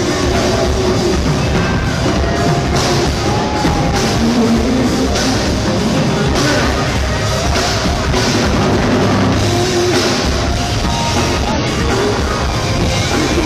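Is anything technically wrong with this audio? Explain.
Yes, there is one fault. From 11.52 to 11.58 s the audio breaks up for about 60 ms, a brief disruption in the sound that marks damaged data in a compressed stream. At that point part of the encoded file or stream was corrupted, because bytes were lost, zeroed, overwritten or mixed with foreign data. The decoder could not read those frames correctly, lost sync and had to search for the next valid frame header before normal playback resumed.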